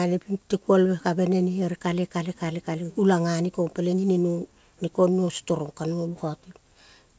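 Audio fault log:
Nothing stood out on listening; the speech arrives over a G.722 call path that carries nothing above 8 kHz.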